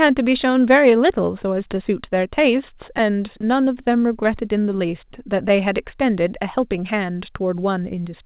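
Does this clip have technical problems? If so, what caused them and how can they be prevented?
Yes. Clock drift between sender and receiver runs through the whole speech clip. The sender's clock is running roughly 2% slow, so the receiver's jitter buffer keeps draining. Unlike a single glitch, this shows up as small timing hiccups recurring at uneven intervals across all of the audio. To prevent it, the receiver should use adaptive resampling that tracks the sender's actual clock rate.

Repeated timing corrections run from 0.47 to 7.96 s. The receiver repeats small pieces to keep up with the slow sender, playing the speech at about 99% speed and adding around a tenth of a second overall. Each edit is small, heard if at all as a slight hiccup or unsteady tempo rather than an audible dropout. Smooth time-stretching, instead of coarse repeat edits, would hide these corrections.

Scattered short gaps appear between 1.75 and 7.58 s, about fifteen of them, none longer than roughly 10 ms. 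Each hole was patched by extending the preceding sound, which leaves brief ticks or smears. These differ from the drift corrections because they are isolated and random, not a steady tempo change. A larger jitter buffer and forward error correction would reduce them.

The call path's narrowband coding, with nothing above 4 kHz, fits G.711 mu-law at 64 kbps and is not a fault.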